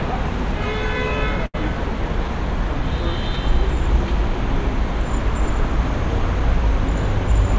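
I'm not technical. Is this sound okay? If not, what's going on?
No. At about 1.46 to 1.56 s there is a short stall from a late packet. A piece of audio arrived late, so the receiver held the last sound for roughly 80 ms, which may sound faintly buzzy, then carried on exactly where it left off. Unlike a lost packet, nothing is skipped. The sound just drags for a moment and everything after it runs slightly later. The call's dull top end, with nothing above 8 kHz, comes from the call path itself.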